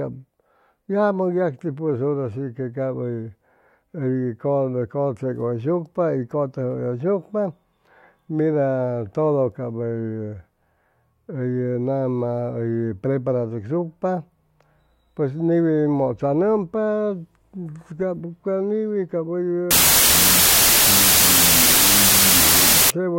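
Wrong sample width runs from 19.71 to 22.90 s, after "cap ca niwi cap". Audio written as 32-bit integers is read as 16-bit, so each sample splits in two. The low-order halves make loud noise, and the buried speech plays at half speed, an octave down.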